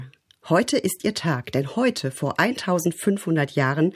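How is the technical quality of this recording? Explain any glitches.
No glitches turn up anywhere in the recording: the signal stays continuous and intact throughout, with nothing audible pointing to a problem in capture, transmission or playback.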